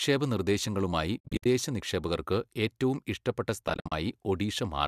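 Speech, hit twice by AAC frame loss with muting: the decoder zeroed lost frames, so the sound fades into soft-edged gaps, about 210 ms lost across 1.18 to 1.46 s just before "നിക്ഷേപകർക്ക് ഏറ്റവും ഇഷ്ടപ്പെട്ട", and 160 ms across 3.68 to 3.92 s right after it, each scattered in runs of up to about 70 ms, which fits short 10 ms frames, likely from the low-delay AAC-ELD compression at 64 kbps.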